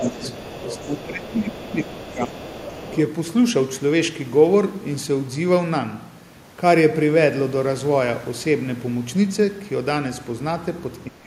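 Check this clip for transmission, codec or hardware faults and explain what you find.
Two echo-related faults are present, clustered in the first three seconds, with one more at the very end.

Speech suppressed in double talk occurs from 0.00 to 0.21 s, 0.78 to 2.35 s, and 11.09 s to the end. The talker's level sinks while a second voice is present. The likely cause is an echo canceller unable to separate local speech from loudspeaker echo, so it turned both down. The dips reach about 10 dB, then about 15 dB for roughly a second, then about 25 dB.

The other side's voice leaks through from 0.02 to 1.00 s, 1.27 to 1.59 s, and 1.79 to 2.99 s. A second voice sits under the talker. The first stretch is about 10 dB below the speech. The later scraps are about 20 dB below. The far end is played on a loudspeaker, and the canceller likely left part of it in the microphone signal. It comes through below the talker's level.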